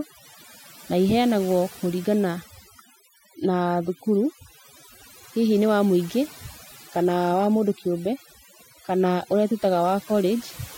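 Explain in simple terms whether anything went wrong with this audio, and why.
Overdone noise removal affects the whole clip: a noise-cleaning tool was pushed too hard, shutting off narrow slices of sound it mistook for background noise, including soft parts of the speech. Pauses drop and break up into twinkling, warbling specks.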